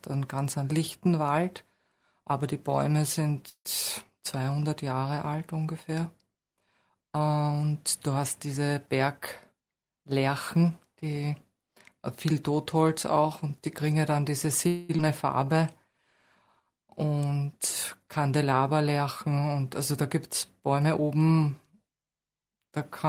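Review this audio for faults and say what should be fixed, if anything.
The first call audio freeze comes at 3.49 to 3.67 s, most likely from packets held up in transit. The jitter buffer ran dry, and the receiver stretched the last sound into a fading buzz for 155 ms, with about 70 ms of silence in it. A second one at 14.67 to 14.91 s fills 218 ms with no silence. In both cases the audio picks up where it stopped, so nothing is lost. The catch is that delay grows by the length of each freeze.

The jitter buffer speed-up shows up at 9.52 to 10.71 s, where the speech runs at about 111% with the pitch unchanged. Roughly 150 ms gets trimmed out in small pitch-period pieces to drain a bloated buffer. At 20.60 to 21.01 s it happens again, at about 110% with roughly 50 ms removed. It sounds a bit rushed.

There's a skip ahead right after the second freeze, at 14.97 to 15.00 s. About 150 ms of speech is dropped and the two edges are joined with only a 12 ms patch. 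That probably comes from the buffer shedding the delay it had just built up.

The jitter buffer slow-down runs from 15.45 to 15.99 s. Speech slows to about 91% at the same pitch as repeated pitch periods add 57 ms. That rebuilds a reserve after the skip, and it leaves sounds slightly drawn out.

To prevent all of this, give the jitter buffer a steadier target and smoother network delay, for example with QoS marking or less competing traffic. The buffer would then stop swinging between starving and overflowing.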